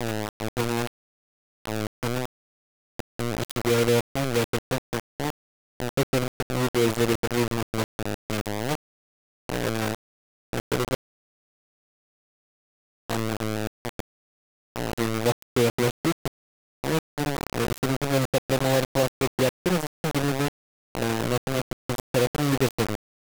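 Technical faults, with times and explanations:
Throughout, low bit depth without dither: grainy distortion tracks the speech and quiet parts sputter or vanish, likely from undithered rounding to 3 bits, with error nearly as loud as the speech.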